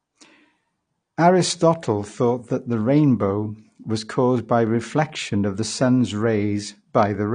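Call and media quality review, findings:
Dull, band-limited speech for the full clip, nothing above 9.7 kHz, with warbling and fizzy texture on sibilants and held vowels. Likely cause: AAC compression (AAC-LC), consistent with about a 32 kbps encode. Encoder lowers cut-off and quantises spectral lines coarsely, leaving holes and noise-filled bands. Codec damage plainly audible.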